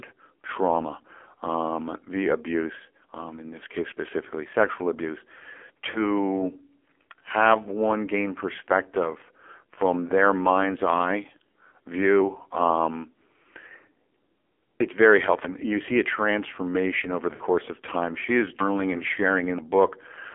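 Across the whole recording the speech carries AMR narrowband mobile codec damage. The band is held to roughly 300 Hz to 3.4 kHz, and the voice has the buzzy, synthetic edge of heavy vocal-tract modelling, which points to a low rate near 5.9 kbps. Because this coloration is constant, it separates itself from the brief events below. Those events are gaps or smears, while this is a uniform thinness and buzz that never lets up.

The first of those events comes at 5.90 to 6.02 s, where lost AMR speech frames cause a short warble and dip of about 40 ms, consistent with two missing 20 ms frames. The decoder fills the gap by repeating the last pitch and spectral shape at falling gain. The result is a smeared, fading continuation rather than a hard break, and the voice returns rough for a moment.

At 15.45 s, between "it's very" and "you see a transformation", a dropped buffer (overrun) produces an abrupt jump forward. 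About 150 ms of audio is simply missing, with no fade and no concealment, so the two sides butt together. That hard edge sets it apart from the frame losses, and the likely cause is the capture software failing to read its buffer in time.

More lost AMR speech frames follow at 17.34 to 17.43 s, after "see a transformation over" and before "of time". This time about 60 ms, fitting three frames, is drawn out and sags toward silence. A last single-frame loss of about 20 ms at 18.98 s gives only a quick warble.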